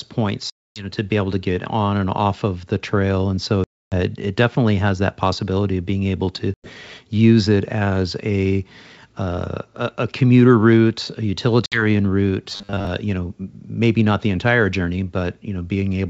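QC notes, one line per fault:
0.50–0.87 s, 3.64–3.96 s, 6.54–6.71 s and 11.66–11.85 s, packet loss on an ADPCM call. Hard-edged silent holes, about 260, 280, 100 and 60 ms of audio gone. The first ends just before "to be able to". The second falls between "the trail and so" and "it it definitely has". The third falls between "of being able to" and "use it as a". After each hole the decoder's predictor and step size no longer match the sender's, so the speech returns slightly distorted.
12.50–12.87 s, robotic sound from repeated short buffers. The sound turns into a rigid metallic buzz at 100 Hz that only loosely tracks the speech. This is likely from audio arriving too seldom, with a roughly 10 ms buffer looped to fill the gap. Most of the real audio in that stretch is skipped.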